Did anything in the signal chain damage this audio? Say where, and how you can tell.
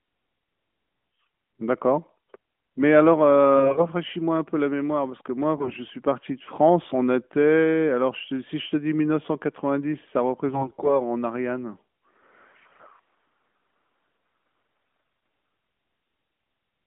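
Yes. The speech turns hoarse and gargly, keeping its pitch and level, at 3.56–3.88, 5.58–5.75, 10.49–11.00, 12.68–12.87 and 14.82–15.28 s. These are AMR bit errors on a weak radio link: roughly 7 to 10 percent of less-protected bits flipped, misplacing the excitation pulses within the narrowband AMR stream.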